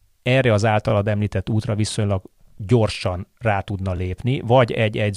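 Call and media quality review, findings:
Overlapping chunks in speech at 2.95–2.97 s and 3.97–4.00 s: 25 ms replayed at 1 s chunk joins, heard as stutter-clicks. Waveform shows duplicated segment; spectrogram shows vertical seam lines.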